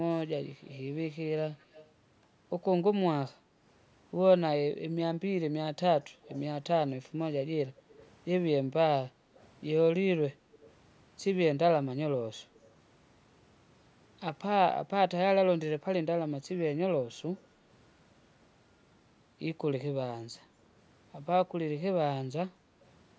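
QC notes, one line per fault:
0.62–1.91 s, 6.01–6.41 s, 8.0–10.66 s, 12.56–12.6 s: echo leak. The far-end echo canceller likely let loudspeaker pickup through, so a faint copy trails the speech by 231 ms, roughly 25 to 35 dB down.
3.48–3.59 s, 7.77–10.51 s: background gated by the echo canceller. The canceller ducked the microphone while the loudspeaker played, so the room sound dips by about 6 dB, then by up to about 8 dB, for roughly 0.6 s in total.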